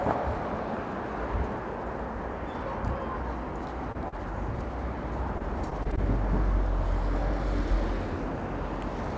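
At 3.92 to 3.96 s and again at 4.08 to 4.14 s, short concealed packet loss: a few tens of milliseconds of audio reached the decoder too late, and the receiver extended the preceding sound to cover each hole before blending back, leaving two brief smears or wobbles in the sound.

From 5.38 to 5.99 s, repeated packet loss (robotic sound): five separate holes, none longer than about 19 ms, were each patched the same way, so roughly an eighth of that span is filler, giving a choppy texture. The call path's codec, which fits G.722, passes nothing above 8 kHz.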